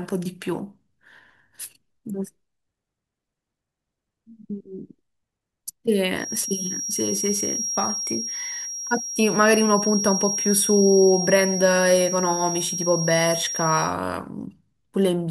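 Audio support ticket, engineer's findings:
Feedback whistle, 6.13 s to 13.96 s. Thin steady tone at 5.6 kHz under the speech, a few dB below it, level swelling and fading slowly. Likely cause: loudspeaker-to-mic loop at the edge of feedback. Gain hovers just under runaway, so the single frequency sustains without building.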